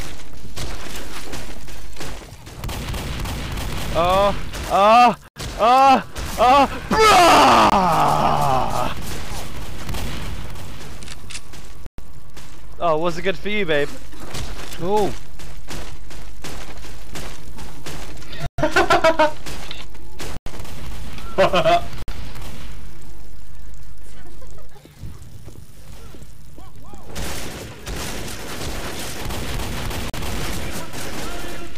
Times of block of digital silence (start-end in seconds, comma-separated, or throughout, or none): 5.28-5.36, 7.70-7.72, 11.86-11.98, 18.46-18.58, 20.37-20.46, 22.02-22.08, 30.10-30.14